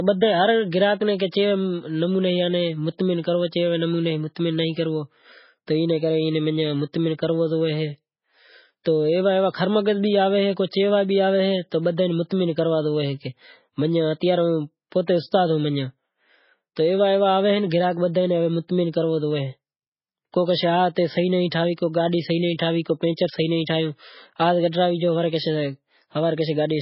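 The speech sounds watery and swirly from start to finish, with sibilants breaking into metallic chirps, consonant attacks smeared, and nothing at all above about 5.6 kHz, so the top end is dull. This is likely heavy MP3 compression: starved of bits, the encoder has cut the treble at a fixed point and zeroed weak frequency lines that flicker on and off between frames, damage consistent with a very low bitrate around 16 kbps.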